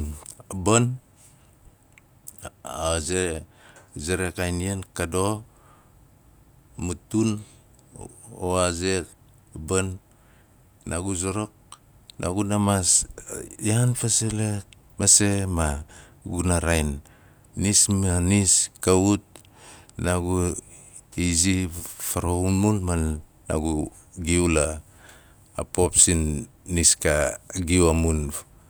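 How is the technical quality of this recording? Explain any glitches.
No glitches or technical faults can be heard here.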